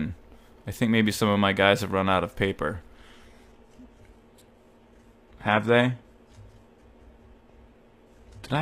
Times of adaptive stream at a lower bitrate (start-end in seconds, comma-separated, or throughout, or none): 2.96-8.62